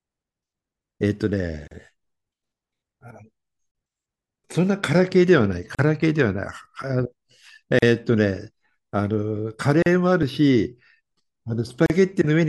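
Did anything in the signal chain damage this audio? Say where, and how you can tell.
Yes. At the encoding stage, the audio was compressed in two-second pieces and joined without trimming each encoder run's start-up delay and final-frame padding. The result is a gap at a join of encoded pieces every 2.0 s, at 1.68, 3.71, 5.75, 7.79, 9.82 and 11.86 s. Each is a hole of about 37 ms (36 ms for the first) that cuts into continuous speech with smeared edges. The speech then resumes exactly where it stopped.

At 6.02 and 10.23 s there are two short jumps where the speech skips forward with no silence, each losing around 10 ms of sound. This is likely a dropped buffer (overrun) at the driver or buffer stage: the capture software fell behind, the hardware overwrote samples it had not yet collected, and the audio on either side of the loss was spliced directly together, producing the skip.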